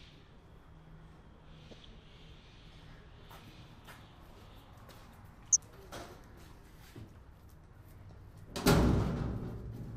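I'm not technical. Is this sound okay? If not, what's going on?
No. There are four short bursts of DAB burbling, at 1.71 to 1.85 s, 3.82 to 3.99 s, 5.44 to 5.59 s, and 8.02 to 8.11 s. Heavier bursts sound like bubbling mud, with little chirps and squelches over the sound, and lighter ones like a few watery blips. It happens when digital radio reception is weak. A few bits arrive wrong and slip past the error correction. Then narrow slices of the sound jump in level for an instant. The last burst is the mildest.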